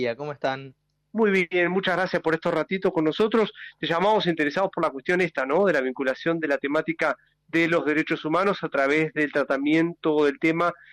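Nothing is technically wrong with the clip.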